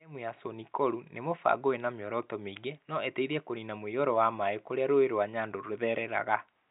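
No faults are audible in the speech; the band stops at about 3.8 kHz, which fits an ordinary G.711 A-law telephone path.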